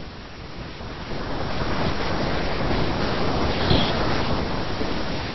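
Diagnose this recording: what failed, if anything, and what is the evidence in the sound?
Nothing in the chain seems to have failed, as the speech runs without any dropout, glitch, distortion or break that would point to a problem at any stage.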